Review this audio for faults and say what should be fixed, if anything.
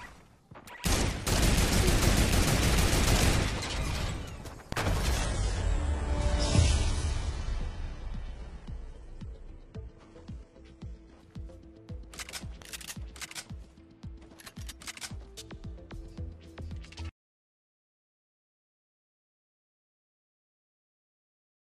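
From 5.2 to 11.2 s, an adaptive stream at a lower bitrate switches abruptly, with no gap. Nothing survives above 11.1 kHz, and the spectrogram shows a hard ceiling there, consistent with a drop from about 96 kbit/s AAC to roughly 12 kbit/s HE-AAC. To prevent it, buffer more or cap the lowest rung of the bitrate ladder higher.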